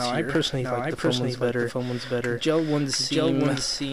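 From start to finish, the audio carries a doubled audio track: a second, full-band copy trails the original by roughly 0.7 s at about the same level, so every event is heard twice. The repeat has no decay or room colouring, which sets it apart from a natural echo. The likely cause is the same signal being captured again through a slower path, or an edit holding two copies out of alignment.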